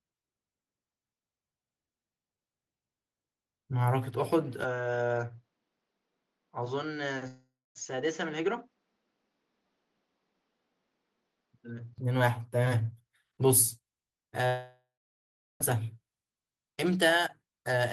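Speech recording with two separate problems. From 4.64 s to 11.98 s the sound turns duller and slightly quieter, dropping by roughly 5 dB, with nothing above 7 kHz and a new low background noise sitting far below the speech, around 45 dB down. The change happens without any gap, and the fuller sound returns at 11.98 s. The likely cause is an input switched to a poorer device, such as another microphone or a headset's call profile, whose narrower band, lower level and own noise floor replace the original input. The second problem is two long network dropouts, likely caused by audio that never reached the receiver. At 7.27 s to 7.78 s about 480 ms is missing: the last sound is stretched into a fading fill, then roughly 240 ms of silence follows before the speech resumes. At 14.47 s to 15.63 s about 1.14 s is lost, and the fill trails off into about 750 ms of silence. In both cases the speech picks up again later, and the lost section does not come back.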